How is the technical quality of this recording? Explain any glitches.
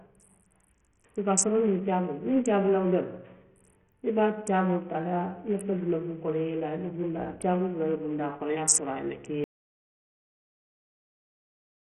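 The technical quality is poor, with heavy codec damage throughout and a dead stretch at the end.

Bluetooth SBC compression is the likely cause of the gritty, flickering treble across the whole clip. A starved bit pool, consistent with roughly 48 kbps, leaves the top sub-bands unfed. On a spectrogram, the energy stops at about 11.9 kHz.

An audio dropout to silence runs from 9.44 s to the end, likely a lost input with silence written. The waveform goes flat, with no room tone.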